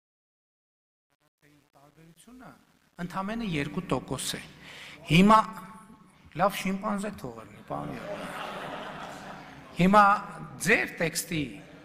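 The opening fade-in, from 0.0 to 3.92 s, sounds gritty, worst up to about 3.25 s. This is truncation distortion on a fade: the level stage kept too few bits without dither, which fits roughly 9 bits, so the quiet waveform collapses into coarse steps.

Throughout the clip there is a metallic buzz with extra tones around each note, from a ripple at around 200 Hz, with the level swinging by about 6 dB. This is overlap-add ripple: frames were rejoined with an overlap whose windows don't sum to a constant gain, so the level pulses once per frame.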